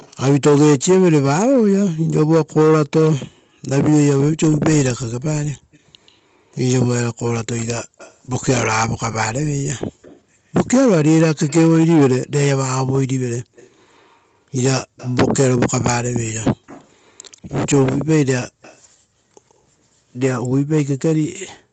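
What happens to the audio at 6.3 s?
At 6.3 s a faint copy of the speech trails it by about 135 ms, an echo leak from 3.05 to 8.15 s, likely an echo canceller letting loudspeaker pickup through.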